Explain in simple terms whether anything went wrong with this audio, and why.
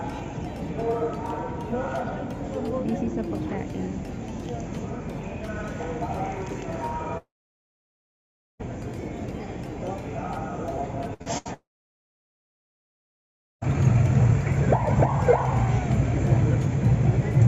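The connection most likely stopped delivering audio twice, a long network dropout each time: from 7.17 to 8.61 s and from 11.54 to 13.63 s. After a brief fading buzz, the sound goes silent for roughly 1.3 and 2 seconds, then resumes with those parts gone.

Just before the second dropout, from 11.14 to 11.50 s, there is repeated packet loss: four small chunks of audio went missing, the longest 76 ms. Each hole was patched by stretching the previous sound, so half of that moment is patched over and it sounds choppy.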